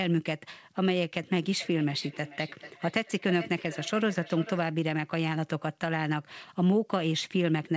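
Feedback echo between two devices runs from 1.58 to 4.71 s in this speech clip: each phrase returns roughly every 0.4 seconds, thinner and more ringing, at up to about 17 dB below the speech, because a second device plays the call back into a nearby microphone whose echo canceller cannot remove it. The audio also shows the call's band limit, with nothing above 8 kHz, which fits a G.722 codec.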